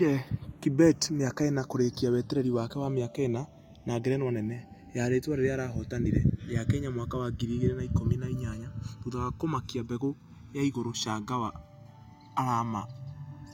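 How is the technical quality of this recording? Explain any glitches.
The recording has one fault that runs through the whole clip: channels drifting apart. The two channels were captured on separate clocks that disagree by roughly 70 parts per million, so the delay between them keeps growing and reaches around a millisecond by the end. When the channels are summed to mono, that changing delay creates comb-filter notches that sweep slowly through the spectrum, giving the speech a gradual, whooshing flange.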